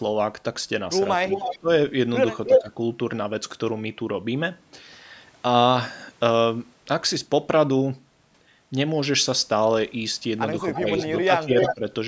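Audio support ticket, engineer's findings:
Echo leak. Far-end echo canceller likely leaving residual loudspeaker pickup, which is returned down the line. Symptom: a delayed second copy of the talker, about 0.31 to 0.33 s behind the original. Events at 1.29–1.58 s, 2.46–2.62 s, 10.73–11.07 s and 11.58–11.75 s. Echo level about 5 dB under the direct speech in three events. At 2.46 s it is about 5 dB above the speech.

Speech suppressed in double talk. Echo canceller likely failing to separate the local talker from simultaneous loudspeaker echo, so it attenuates both. Symptom: the voice on that side dips or breaks up in pieces. Events at 1.59–1.68 s (deepest drop roughly 20 dB), 2.47–2.69 s (roughly 10 dB), 10.79–10.88 s (roughly 5 dB) and 11.25–11.85 s (roughly 15 dB, about 0.3 s of it affected). Each coincides with or closely follows an echo leak.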